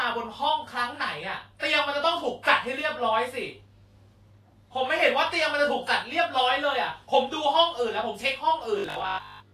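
Throughout the speech there is a plainly audible grainy, hissy texture, and nothing comes through above 14.2 kHz. This is likely Vorbis compression at a low quality setting, consistent with a bitrate near 31 kbps, where treble detail is quantised so coarsely that it turns to noise.

From 8.78 to 9.52 s the voice becomes a rigid, metallic buzz at 50 Hz that only loosely follows the speech. This is robotic sound from repeated short buffers, likely caused by audio arriving too seldom. Each gap is filled by replaying a stretch of about 20 ms, and most of the audio in that span is repeated material.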